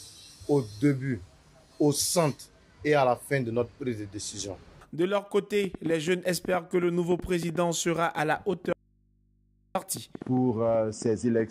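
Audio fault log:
5.40–11.41 s, train of clicks: about thirty sharp, similar ticks at roughly 4.5 per second on an uneven pace, peaking around 5 dB above the programme and audible through quiet passages too. The likely cause is repeated pulses from interference by nearby equipment or a faulty connection or power supply.
8.73–9.75 s, audio dropout to a faint residue: the sound cuts out abruptly for 1.02 s, leaving only mains hum about 40 dB down, then snaps back mid-flow. This is likely the wanted signal being lost while the downstream path stayed live and picked up hum from the open input.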